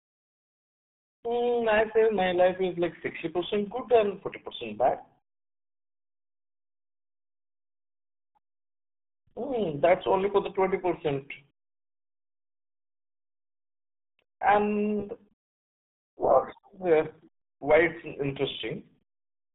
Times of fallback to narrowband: none

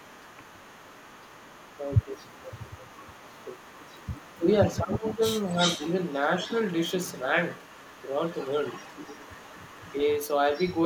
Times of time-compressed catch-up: none

